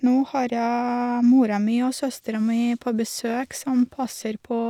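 Nothing stood out on listening to this recording.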